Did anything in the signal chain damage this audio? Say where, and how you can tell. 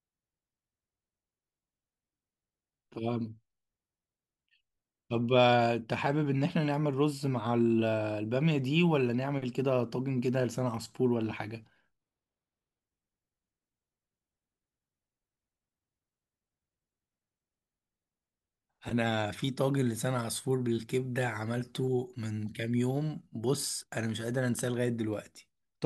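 Yes. At the sample-format stage, audio read two samples at a time (double speed) hit the speech from 11.94 to 12.81 s. The reader treated each pair of samples as one frame, as if the stream were stereo or twice the sample width, so that stretch plays at 2x speed and jumps up a full octave, 12 semitones. You can tell by the sudden chipmunk pitch and rushed timing.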